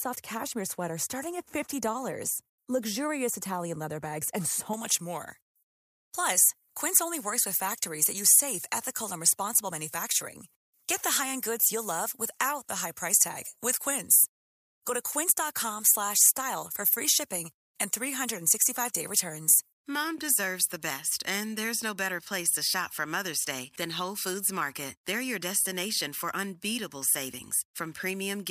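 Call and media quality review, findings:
Pre-emphasis left on from 4.73 s, right after "leather bags and", to the end. Thin, bright, hissy sibilants. J.17 treble boost never de-emphasised, about 11 dB up at 10 kHz.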